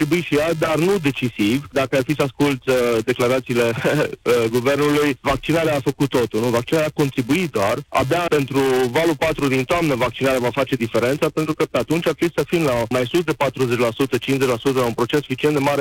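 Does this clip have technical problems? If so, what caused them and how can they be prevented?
Yes. A steady 375 Hz buzz runs through the whole clip, tracking the sound's level. It comes from a filter restarted on every block: each block starts from silence with a small transient, a rate that fits 128-sample blocks. Carrying the filter's state across blocks prevents it.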